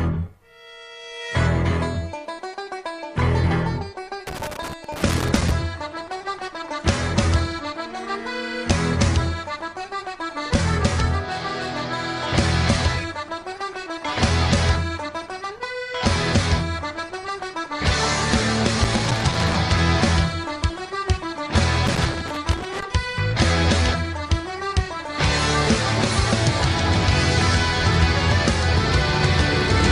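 Three irregular bursts of crackle and scratching break through the sound, from 4.27 to 5.51 s, again from 18.84 to 19.55 s, and from 21.87 to 22.83 s, each roughly a second long or less. This is loose connector crackle: a worn or dirty contact in the signal path is making and breaking as it shifts, chopping the audio into ragged fragments, while any DC present on the line adds pops.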